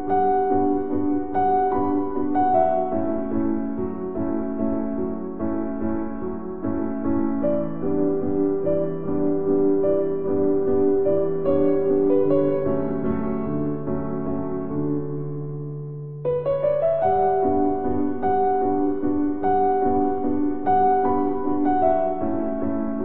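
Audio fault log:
Nothing to log here; I listened closely and didn't catch a single fault anywhere in it.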